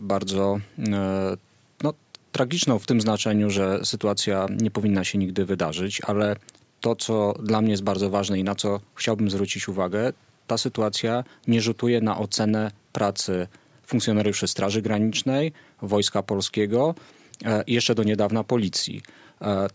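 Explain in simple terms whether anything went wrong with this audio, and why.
Nothing went wrong with this audio; it has been through a call's microphone processing, which trims the lowest bass and leaves nothing above 8 kHz, and that is just how call audio normally sounds.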